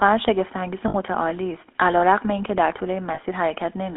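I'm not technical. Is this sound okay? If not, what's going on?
No. The whole clip has been through the GSM full-rate codec, an old mobile-phone speech coder. It trims the highs and lows and gives the voice a buzzy, gravelly roughness. Lost GSM frames occur at about 0.88 to 0.95 s and 3.14 to 3.19 s. Each time, the phone briefly repeated its last good data, so the sound holds as a short metallic ring.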